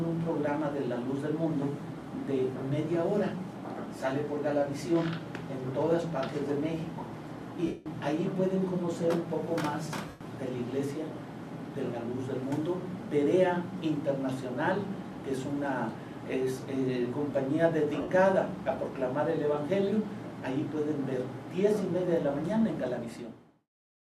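Lost LE Audio frames break the sound three times: at 7.66–7.86 s (about 195 ms), 10.08–10.21 s (120 ms) and 18.01–18.08 s (67.5 ms). In each gap the LC3 decoder conceals the missing frames by replaying the last good spectrum with randomised phase signs. This produces a grainy, smeared continuation instead of real signal, and the smear fades as the loss goes on.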